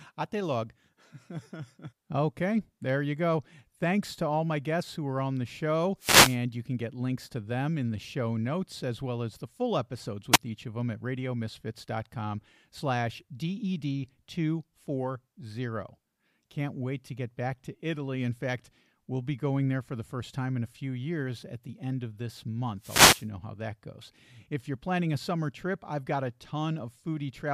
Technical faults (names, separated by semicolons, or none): wireless microphone noise hit